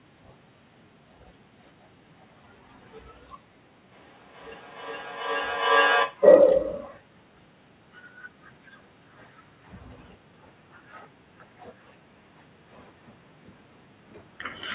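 Speech, squeezed into a narrowband call with nothing above 4 kHz. From 3.91 to 6.23 s there's feedback echo between two devices: a second device in the room replays the sound, the first device's microphone sends it back round, and it repeats roughly every 0.4 s, thinner and ringier, peaking about 9 dB below the speech.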